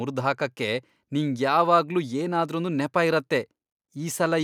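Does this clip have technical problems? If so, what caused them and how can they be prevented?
No, nothing stood out as a technical problem on listening to this speech clip, so there is nothing to trace back or prevent.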